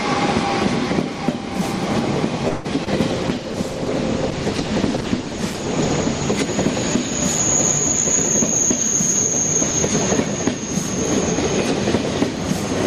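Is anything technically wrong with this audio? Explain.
Yes, there are three faults in quick succession.

From 2.48 to 2.66 s there is a call audio freeze. Packets were likely held up in transit, so the receiver's jitter buffer ran dry and the receiver had to stretch the last sound it had. That gives about 164 ms of synthetic continuation, a fading buzzy smear in place of new audio. When the packets arrive, the sound resumes where it stopped. Nothing is lost, but the audio now runs later than before.

From 2.84 to 2.88 s there is short concealed packet loss. About 20 ms of the call never reached the decoder in time. The receiver extrapolated from the preceding audio to fill the hole and then crossfaded back into the real signal. The patch is heard as a brief smear or wobble, and whatever fell inside that window is gone rather than delayed.

From 3.11 to 6.40 s there is a call bitrate drop. 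The sender's bandwidth estimate fell, and the encoder was throttled from 48 to 13 kbps, staying at the lowest rate for about 3.2 s. At that rate Opus quantises coarsely and trims the upper frequencies. The sound becomes muffled, rough and watery until the rate recovers.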